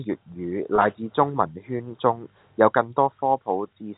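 From 0.76 to 0.78 s, just before "至中文圈", the speech briefly holds and turns slightly buzzy. This is packet loss with pitch repetition: about 20 ms of audio, consistent with a single lost packet, was bridged by repeating the last pitch period over the G.711 telephone coding.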